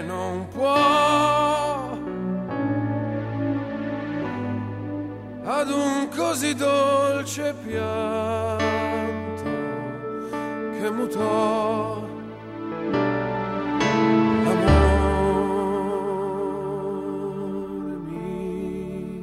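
Nothing here catches the ear as a technical fault, so there's really nothing to flag in this audio.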